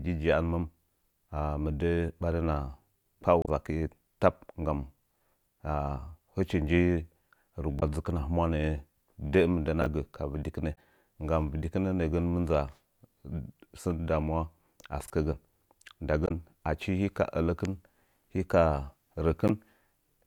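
Speech, with two kinds of trouble. Five short glitches at 3.42 to 3.48, 7.77 to 7.83, 10.72 to 10.77, 16.24 to 16.31 and 19.48 to 19.50 s point to damaged data in a compressed stream: the decoder chokes on corrupted frames, loses sync and resyncs a little further on. There are also chunks out of order at 9.82 to 9.86 s and 15.04 to 15.10 s. These are 20 ms blocks played one and then two slots late, so you get a brief jumbled stutter with hard joins.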